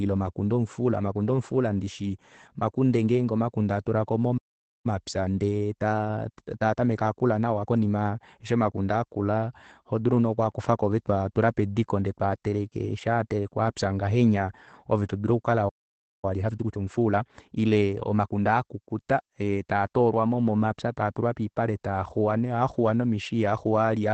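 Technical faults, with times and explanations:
throughout: Opus voice compression. The speech is muffled, hoarse and faintly robotic, with nothing above about 8.7 kHz, which fits a low-bitrate wideband SILK setting near 12 kbps.
4.37–4.86 s and 15.68–16.25 s: playback stall. The speech drops to silence mid-flow for 0.47 s and then 0.54 s, likely because the player ran short of data.
4.86–7.86 s and 16.25–18.41 s: time-compressed catch-up. After each stall the speech runs 1.15× and then 1.25× fast at unchanged pitch, as small pieces are cut out and cross-faded, not the chipmunk rise of a speed-up.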